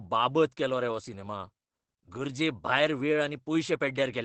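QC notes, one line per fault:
Throughout: Opus voice compression, SILK mode at a setting consistent with roughly 12 kbps, leaving speech muffled and hoarse; spectrogram shows nothing above 8.5 kHz.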